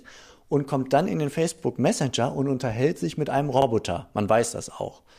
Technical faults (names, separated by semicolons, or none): overlapping chunks